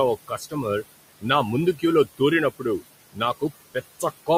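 A short speech recording with noise suppressor artifacts running the whole way through: the suppressor is knocking the background down by about 18 dB, and you can hear it working. The room noise, which sits about 16 dB under the talker, drops away in the gaps and creeps back up under the words. That pumping comes from the processor re-deciding frame by frame which bands are steady noise and ducking them. On top of that there's speech cut by the noise suppressor in three places, where it mistook parts of the voice for noise and pulled them down with the background. The first is from 0.28 to 0.65 s, dipping by up to about 18 dB over something like a fifth of a second. The second runs from 2.51 to 2.82 s, shallower at about 13 dB, and about a tenth of a second is affected. The third, from 3.12 to 3.21 s, is the deepest at about 20 dB. In each spot the softer bits come out swallowed or faint.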